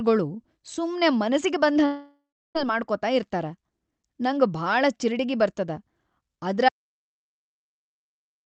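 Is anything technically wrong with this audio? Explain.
Yes, there are two faults, heard through speech that is band-limited at about 8 kHz by an Opus call path.

From 1.85 to 2.57 s, right after "ಸುಮ್ಮೆ ಮನಸಿಗಿ", the last sound smears into a fading buzz, then roughly a third of a second of near-silence, before speech returns at "ಮಾಡ್ಕೊತ ಇರ್ತಾರ" with about 0.7 s missing. This is likely a long network dropout, with the receiver concealing the gap until nothing remained to extend.

From 6.69 s to the end, the sound cuts off abruptly into complete silence, with no room tone at all. The cause is likely an audio dropout to silence: the input was lost and the recorder kept writing silence, so the remaining speech is gone.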